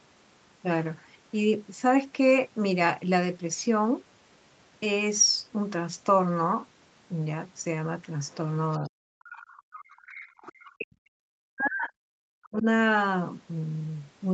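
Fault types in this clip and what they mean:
Other side's voice leaking through: A faint second voice, about 30 dB below the talker, surfaces in short scraps at 8.28–8.35 s and 8.71–8.78 s, and about 25 dB down at 9.33–9.50 s, then grows to about 20 dB down and runs continuously from 9.73 to 10.73 s. The likely cause is the far end playing on the talker's loudspeaker and reaching the microphone, with the echo canceller failing to subtract all of it.
Speech suppressed in double talk: The talker's voice sinks sharply, by roughly 40 dB at its deepest, from 8.79 to 9.75 s and again from 10.74 to 12.65 s, about three seconds in total. Likely, both sides spoke at once, the echo canceller could not tell the local talker from the loudspeaker echo, and it attenuated everything together.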